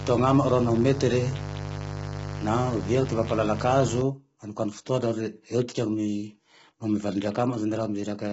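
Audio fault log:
throughout: low-delay AAC compression. The speech sounds rough and grainy from start to finish. A hiss-like noise fills the gaps between the voice's harmonics. Nothing is heard above 7.7 kHz, which dulls the top of the voice. The likely cause is the low-delay AAC of video calls at a low bitrate, around 16 kbps. Too few bits remain to code the harmonics cleanly.
0.00 to 4.02 s: mains buzz. A steady, raspy buzz sits under the speech for the first half of the clip, then stops. It is built on 50 Hz, with a stack of harmonics climbing well into the kilohertz range, which gives it the harsh edge. It is loud, only around 10 dB below the speech. Sharp switching spikes from a dimmer, rectifier or unshielded cable, repeating twice per mains cycle, produce this kind of buzz.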